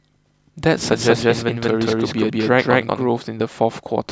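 From about 0.92 s to 3.08 s the speech picks up a doubled audio track: a second, full-band copy trails the original by around a fifth of a second, at roughly the same loudness. It sounds like a clean slapback with no room tail, switching on and off abruptly at both ends. The likely culprit is the signal being captured twice, once through a slower path, or an edit leaving two copies out of step.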